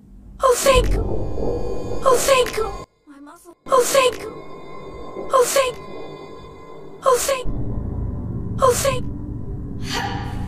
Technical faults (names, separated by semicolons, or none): one channel inverted